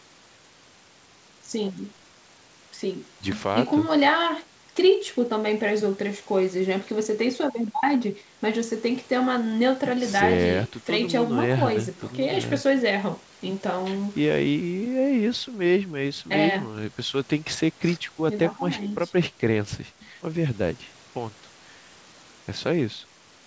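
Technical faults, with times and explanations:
No faults found; the speech sits within the 8 kHz bandwidth expected of a wideband call path, consistent with G.722 at 64 kbps.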